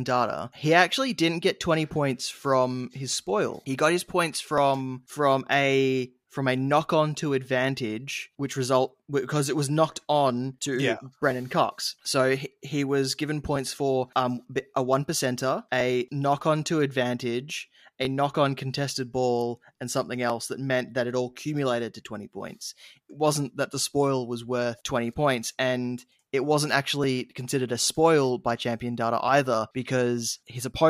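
Two clocks in the chain likely disagree by a few hundred parts per million, so the shared buffer slips every 2.24 s, dropping or repeating a few dozen samples. From 2.33 to 29.29 s, these clock drift buffer slips put about fifteen evenly spaced clicks into the speech.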